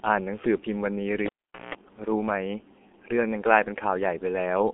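The clip is speech, and it carries the G.723.1 codec throughout. The sound is muffled and hoarse, and consonants blur. The band runs from about 250 Hz to 3.4 kHz, with nothing above 3.7 kHz. The heavy coding damage points to a rate near 6 kbit/s. A cable pulled and plugged in disrupts the audio from 1.26 s to 1.75 s. A pop opens a gap of about 0.44 s. Then a 60 Hz mains buzz lasts about 0.18 s while the plug tip makes partial contact. A second pop follows as the sound returns.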